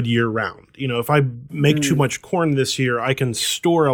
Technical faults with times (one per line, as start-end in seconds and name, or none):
none